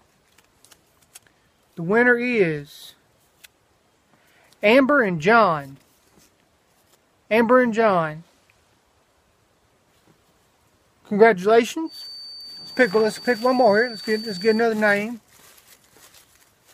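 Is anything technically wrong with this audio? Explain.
Yes. From 11.83 to 14.69 s, a thin feedback whistle at 4.6 kHz, likely a loudspeaker-to-microphone loop balanced at the edge, swells and fades slowly in level but never builds into a runaway howl.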